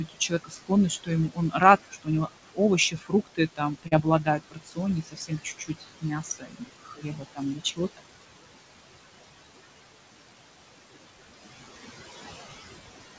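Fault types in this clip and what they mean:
Noise suppressor artifacts: a suppressor is pulling down every band it judges to be steady noise, by about 19 dB, frame by frame, so the room noise dips in the gaps and swells under the speech. A spectrogram shows the noise floor pumping with speech activity.
Speech cut by the noise suppressor: the suppressor mistook parts of the speech for noise and lowered them, by up to about 22 dB, swallowing soft consonants and quiet endings across 0.06–2.59 s and 2.90–7.99 s, about three seconds in all. On a spectrogram, weak speech energy blanks out abruptly.
Short concealed packet loss: around 3.88–3.94 s, roughly 40 ms of audio arrived too late, and the receiver filled about 34 ms by extending the preceding sound before blending back, heard as a brief smear. On the waveform and spectrogram, a short stretch repeats or smooths unnaturally.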